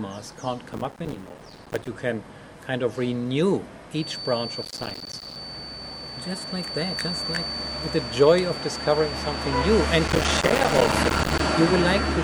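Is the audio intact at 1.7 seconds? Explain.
No. Processor overload crackle runs from 0.73 to 1.88 s: the processor repeatedly misses deadlines for buffers of roughly 5 ms, dozens of them, each miss leaving a short hard-edged gap of silence. Together these gaps form a gritty crackle over the sound.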